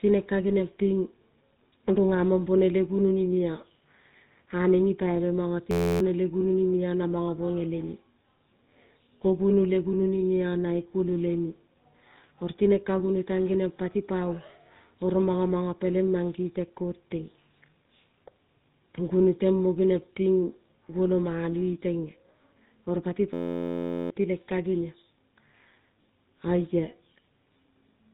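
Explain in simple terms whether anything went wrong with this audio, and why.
The speech went through the old GSM full-rate codec, a phone compression scheme that rebuilds the voice crudely and removes everything above about 3.8 kHz, so it sounds thin, buzzy and gravelly throughout.

Twice the system froze in a system hang loop while the sound hardware kept replaying one tiny 11.6 ms slice. Right after "nipaibe mono", from 5.71 to 6.00 s, and again from 23.34 to 24.10 s, the speech turns into a steady buzz at about 86 times per second and the real audio in those gaps is lost.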